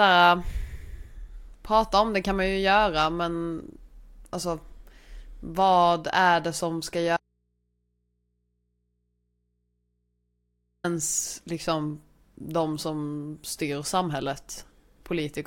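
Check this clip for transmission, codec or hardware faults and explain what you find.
One fault: an audio dropout to a faint residue. From 7.17 to 10.84 s the speech signal was likely lost upstream while the input stayed live, so for 3.67 s the speech cuts abruptly to mains hum, roughly 50 dB below the speech level, before snapping back.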